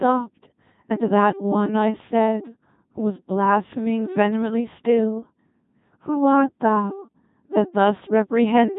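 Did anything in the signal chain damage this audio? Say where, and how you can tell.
Yes. The damage happens at the codec stage, where the audio was passed through a Codec 2 vocoder for its whole length. This low-rate vocoder sends only pitch, voicing, energy and a coarse spectral envelope, and the decoder rebuilds the speech from sine waves rather than from the original waveform. The result is heavily robotic, buzzy speech with nothing above 3.8 kHz, and the degree of smearing fits a 2.4 kbit/s mode.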